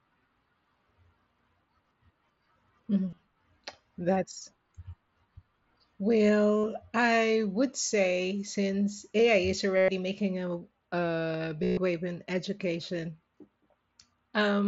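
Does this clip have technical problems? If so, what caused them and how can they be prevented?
Yes. Four short buzzy, level-held tones with a slight warble as the sound resumes occur at 3.1 to 3.18 s, 6.57 to 6.64 s (just before "I would say since"), 9.77 to 9.88 s (before "making a a"), and 11.64 to 11.77 s (between "making a a" and "wave in education"). This is concealed Bluetooth headset packet loss. Audio packets from the headset went missing, and the phone filled each gap by repeating the closest-matching recent stretch of waveform. The first event is scattered losses with runs of up to 30 ms. The later ones are solid gaps of about 68, 113 and 135 ms, so their buzz is longer and more obvious. The wideband mSBC link itself adds only light graininess. To prevent this, keep the headset close to the phone with a clear line of sight and away from Wi-Fi and other 2.4 GHz interference.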